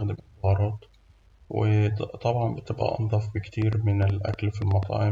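Speech with a train of clicks from 3.62 to 4.84 s, after "بتبقى أنضف". About ten uneven pops, roughly 6.6 per second, peaking about 5 dB above the sound. Likely interference or a faulty connection or power supply.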